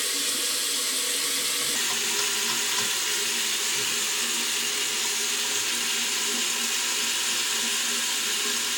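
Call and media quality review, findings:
Section at the wrong speed, 1.76 s to end of clip. Everyday sounds drop abruptly to 0.845x speed, about three semitones lower and audibly slower and heavier. Likely cause: playback or resampling stage running on a mismatched clock for this segment. Spectrogram: all harmonics and spectral features shift downward together at 1.76 s, with events stretched along the time axis. Waveform: transients spaced wider after the boundary.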